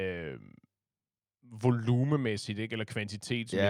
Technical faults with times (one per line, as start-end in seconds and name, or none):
none